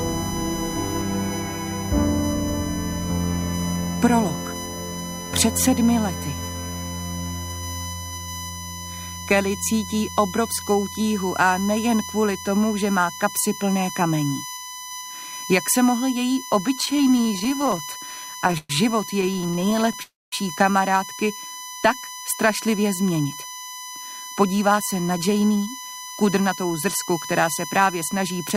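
Running through the whole recording is a USB whine, a fixed tone built on 1 kHz whose strongest harmonic sits at 6 kHz, at about 15 dB below the programme. The bus's 1 ms frame rhythm leaks into the audio through power or ground, giving a steady, thin pitch that never moves with the material. On a spectrogram it appears as perfectly straight horizontal lines at multiples of 1 kHz, brightest at 6 kHz, spanning from start to end.

From 16.75 to 18.71 s come repeated stalls, a stutter: 35 short breaks where packets arrived too late and the jitter buffer kept running dry. The receiver stretched the preceding sound to cover 460 ms in total, about 23% of that stretch, with the longest hold at 117 ms. A second burst follows from 19.21 to 20.00 s, with 15 much briefer holds of at most 14 ms covering 145 ms. Nothing is lost, but the audio drags and judders. The waveform shows the flow repeatedly broken by little repeated or smeared segments, and the spectrogram shows frozen, smeared columns in place of normal movement.

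Immediately after, from 20.02 to 20.34 s, there is a call audio freeze. The audio hangs for roughly 0.3 s, with a brief tail of continued sound and then about 210 ms of silence, before resuming exactly where it stopped. The likely cause is packets held up in transit, which pushed the overall delay up by about 0.3 s. The waveform shows a short decaying smear followed by a flat gap, and the spectrogram shows a blank vertical band.

From 23.24 to 28.02 s the jitter buffer speeds up to shed excess delay. It removes many tiny pitch-period slices, about half a second in all, so the audio runs at 110% of normal speed with unchanged pitch and sounds hurried. On the spectrogram, events crowd closer together in time while their frequency bands stay where they were. In the waveform, small splice points follow one after another.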